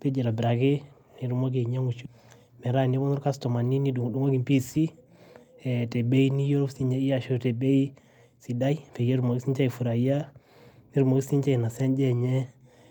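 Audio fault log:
2.05 s: skip ahead. Roughly half a second of speech is missing, and playback jumps straight from one side of the gap to the other with no fill. A stretch of audio was discarded while later packets were already queued, cutting the delay by about that amount.
2.43 to 5.60 s: jitter buffer speed-up. Speech runs about 9% fast at unchanged pitch and sounds hurried. The receiver repeatedly removed short pitch-period pieces to drain excess buffered audio, taking out roughly 300 ms in total.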